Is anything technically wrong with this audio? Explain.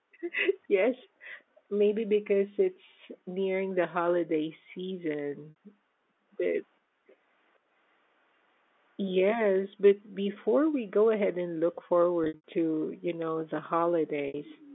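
Yes, two faults can be heard.

Echo leak: faint copies of the speech trail the original by about 0.45 s, at 0.12–0.18, 1.01–1.08, 3.16–3.20 and 7.07–7.15 s, roughly 35 to 40 dB below the speech. A louder stretch, around 25 dB down, runs from 14.45 s to the end. The likely cause is a far-end loudspeaker whose echo canceller let part of what its microphone picked up back into the call.

Packet loss with pitch repetition: at 5.50–5.56 s and 14.28–14.34 s, about 60 ms of audio is replaced by a briefly held, buzzy tone. Between 12.24 and 12.43 s, 160 ms of losses are scattered over 200 ms, with the longest gap 80 ms, so the sound stutters and fades before the speech cross-fades back in. The receiver filled each gap by repeating the last pitch period and fading it out.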